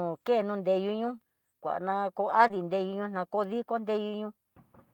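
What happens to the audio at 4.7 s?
Nothing goes wrong at 4.7 s; the speech carries on intact through that moment.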